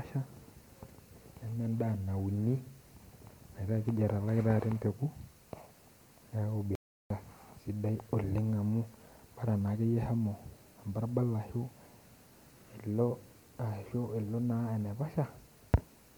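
At 6.75 s the speech cuts out mid-flow and stays silent for about 350 ms, resuming at 7.10 s. That's a playback stall, most likely the player running dry of data or its thread getting blocked before output could pick back up.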